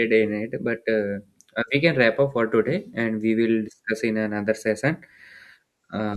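Nothing in the recording calls for comment, since not a single technical fault turns up anywhere along the way.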